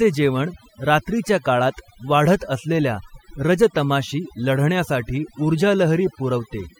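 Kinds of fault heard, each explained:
Overdone noise removal: an overly aggressive noise reducer suppresses frequency bands near its noise estimate, leaving a lowered background that breaks up into twinkling specks throughout.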